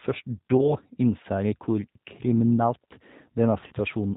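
Throughout, the speech has passed through the G.729 codec at 8 kbit/s, which discards everything above 4 kHz and rebuilds the voice from a model, leaving it dull, rough and slightly synthetic. From 0.57 to 0.75 s, about 20 ms of audio goes missing, consistent with one lost packet, and VoIP packet loss concealment fills the gap by extending the last frame. The voice smears into a buzzy tone or coloured noise that fades, and stays weak or distorted while the decoder recovers. From 3.67 to 3.73 s, a 40 ms gap, consistent with two lost packets, is concealed the same way and produces another short fading stretch of sound.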